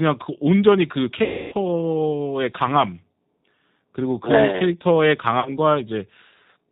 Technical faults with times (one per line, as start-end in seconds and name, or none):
0.00-6.72 G.729 codec
1.24-1.55 VoIP packet loss concealed by the speech codec
5.40-5.51 VoIP packet loss concealed by the speech codec